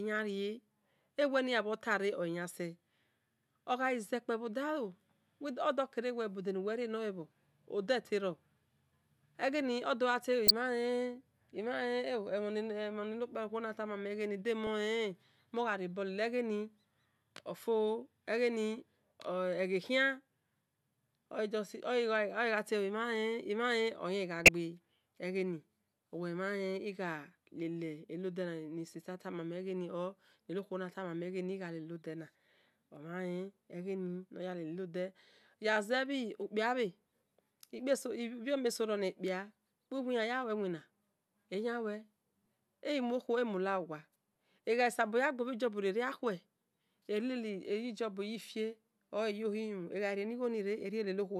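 At 10.47–10.51 s and 24.37–24.49 s, a corrupt frame was decoded. Damaged bits put energy at wrong frequencies. Each heard as a chirp, squeak or burst of noise peaking around -10 dBFS.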